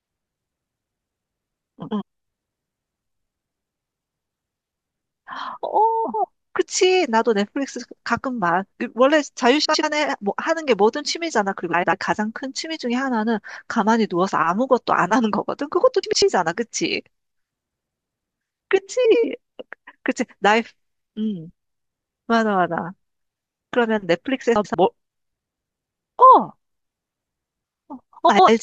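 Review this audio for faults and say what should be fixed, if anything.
Frames out of order occur eight times, at 1.82–2.02 s, 6.04–6.25 s, 9.64–9.84 s, 11.73–11.93 s, 16.03–16.22 s, 19.05–19.25 s, 24.55–24.75 s and 28.29–28.49 s. In each, two adjacent blocks of about 93 ms, which fits runs of four frames, are played back with their order swapped. The result is a roughly 0.2 s garbled flutter, with no overall time lost. The fix is to reorder packets by sequence number in a jitter buffer before decoding.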